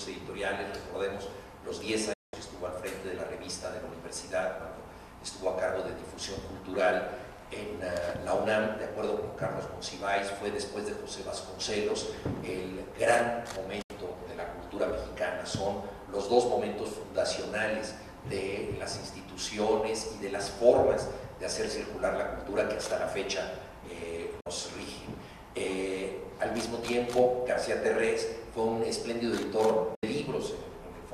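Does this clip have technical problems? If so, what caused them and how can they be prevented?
Yes. There are four digital broadcast dropouts, where the audio fades out in about 8 ms and goes silent at 2.13–2.34 s, 13.82–13.91 s, 24.40–24.47 s and 29.95–30.03 s, losing 192 ms, 72 ms, 48 ms and 72 ms. Each silence is the receiver muting over corrupted frames until clean ones return, which fits frames of about 24 ms each. A stronger, steadier signal from better antenna placement or gain prevents this.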